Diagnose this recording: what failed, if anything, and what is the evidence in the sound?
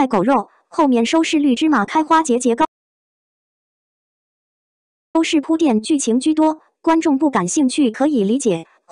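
The input feeding the recorder most likely dropped out upstream, at the capture device or its link, while the recorder kept writing samples, so the file holds an audio dropout to silence. At 2.65 s the sound cuts off mid-flow and returns abruptly at 5.15 s. The 2.49 s between is pure silence, with no room tone or noise floor. Whatever happened in that span was never captured and cannot be recovered.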